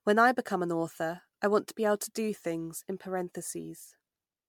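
From start to finish the speech has that swirly, hollow quality of generation loss, most likely from being run through MP3 encode and decode something like ten times, each pass at a rate that sounds around 130 kbit/s. Every round quantises on a shifted frame grid, so the noise and spectral holes pile up instead of staying put. Consonant attacks come out smeared, the tone sounds watery in a way one pass at that rate wouldn't explain, and there's nothing above about 19.9 kHz.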